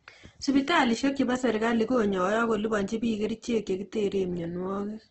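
From start to finish the speech sounds grainy and rough, with a noisy, sandpapery texture over everything and nothing at all above 8.2 kHz, so it sits in a flat wideband box. That's most likely Opus compression in its music-style CELT mode, run short of bits, which fits roughly 12 kbps: the encoder keeps each band's energy but fills the starved bands with folded copies or noise, so detail turns to grit.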